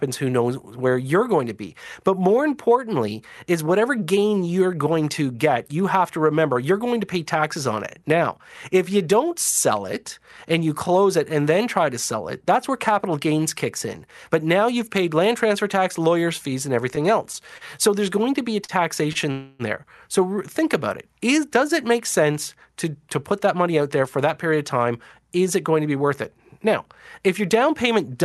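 Packets started arriving late in the second half of the clip, and each time the jitter buffer ran dry. Three short stalls from a late packet come first. At 17.58 s, then at 18.65 s and 19.13 s (both just after "going to be a"), the receiver had nothing new to play and stretched the last sound for 30 ms, 39 ms and 25 ms before resuming where it left off. Nothing is lost, but each spot has a brief held sustain with a slight buzz or dip that nudges the timing.

From 19.31 to 19.62 s comes a longer call audio freeze, likely caused by packets held up in the network. The receiver kept extending the last sound for about 282 ms, so it never drops to silence and instead smears into a fading buzz or hiss. The audio then picks up from the point where it stopped, adding a gap without cutting anything out.

Between 23.08 and 24.53 s, after "it make sense to" and before "of time is it", there is a jitter buffer speed-up. 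The buffer had built up surplus delay, so the receiver trimmed many tiny pitch-period slices, about a tenth of a second in total. The speech runs at about 106% speed with its pitch unchanged, so this stretch sounds slightly hurried.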